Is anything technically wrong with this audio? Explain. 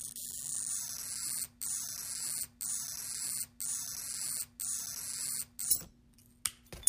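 Yes. From 1.66 to 5.71 s a broken-record loop replays one 0.99 s fragment four times, back to back and identical. Playback likely stalled and kept resending its last piece, so the intended audio is lost. Unlike echo, the repeats never fade or overlap.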